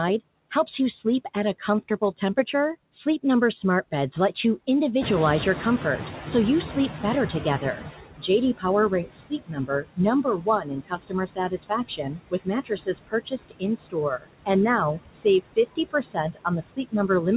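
Noise suppressor artifacts run through the whole clip: the suppressor pulls down frequency bands it judges to be steady noise by about 19 dB, frame by frame. The background dips between phrases and swells under the speech, and the audio stops at 4 kHz, which fits a narrowband G.711 mu-law call path.

Noise suppressor catching up, from 5.0 to 7.97 s: the room noise jumps by about 16 dB at around 5 s, and the suppressor's noise estimate needs nearly 3 s to follow. The louder background first comes through with less reduction, then sinks by about 15 dB as the estimate settles.

Speech cut by the noise suppressor, from 7.44 to 14.49 s: the suppressor mistakes parts of the speech for noise. Roughly two seconds in total are pulled down, by up to about 21 dB, so the affected speech sounds swallowed.

Speech cut by the noise suppressor again, from 14.95 s to the end of the clip: the same misjudgement recurs, with speech dropping by up to about 19 dB. 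The affected speech is turned down with the background and sounds faint or swallowed.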